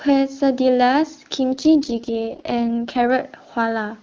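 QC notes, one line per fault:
1.52–3.09 s, AMR rate drop: the speech turns rougher and more synthetic, with a raspy texture, then clears again at 3.09 s. The bandwidth stays the same and there is no gap. This points to the AMR-WB (HD Voice) codec stepping down from its clean 23.85 kbit/s mode to the lowest 6.6 kbit/s mode, which fits a link adaptation that trades speech bits for error protection.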